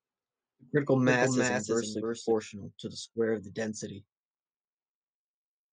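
A doubled audio track is under way from the start and runs to 2.32 s. A dry, full-band copy of the speech trails about a third of a second behind, about 5 dB quieter, then stops abruptly. The likely cause is a slower duplicate capture path.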